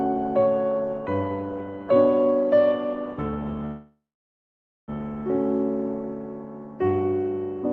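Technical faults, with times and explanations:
3.65–4.90 s, call audio freeze: the sound stops and the last fragment trails off as a fading buzz or hiss into about 0.89 s of silence, likely from packets stalling so the jitter buffer ran dry. Playback then resumes where it left off, with nothing lost but the rest of the clip now running about 1.2 s late.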